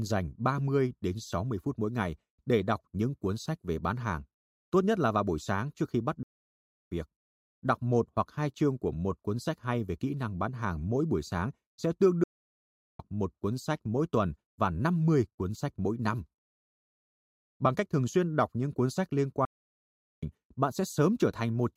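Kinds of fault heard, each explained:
Playback stall: the speech halts in mid-flow three times, at 6.23 s for about 0.68 s, at 12.24 s for about 0.76 s and at 19.45 s for about 0.77 s, then carries on. Each gap is likely the player running short of data or having its output thread blocked until it recovered. On a waveform each shows as a flat line cutting through active speech; a spectrogram shows a clean, empty vertical band across all frequencies.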